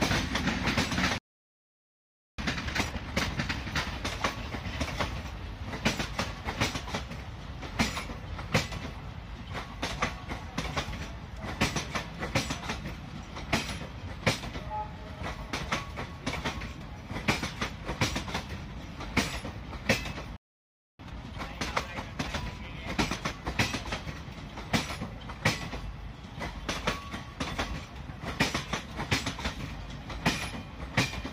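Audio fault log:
1.18–2.39 s, playback stall: the player likely ran dry or had its thread blocked, so output cuts to silence mid-flow for about 1.2 s before resuming.
2.39–3.59 s, time-compressed catch-up: the player trims its backlog by dropping and cross-fading short slices, so the sound runs at double speed, normal pitch.
20.36–20.99 s, playback stall: output halts again, likely from starved or blocked playback, leaving a gap of about 0.63 s in the middle of the sound.
20.99–23.49 s, time-compressed catch-up: a gentler backlog trim plays the sound at 1.25 times speed, hurried but unchanged in pitch.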